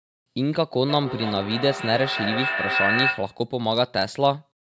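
Feedback echo between two devices runs from 0.89 to 3.45 s: a second device in the room replays the speech, the first microphone picks it up again, and its echo canceller can't remove sound it didn't play. The speech returns roughly every 300 ms, thinner and ringing, peaking at about 1 dB below the direct speech.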